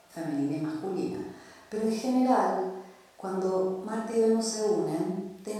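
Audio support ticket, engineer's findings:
No audible faults found in the speech recording; nothing to attribute to any component in the chain.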